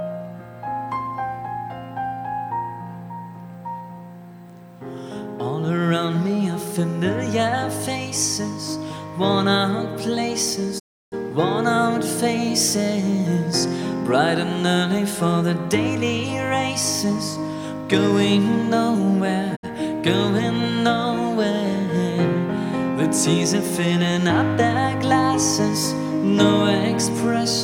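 A digital broadcast dropout hits twice: the receiver lost good frames and muted until they returned. At 10.78 s the sound fades out over 20 ms into a 320 ms silence, ending at 11.14 s; at 19.55 s a shorter 64 ms hole follows. Both gaps are simply lost.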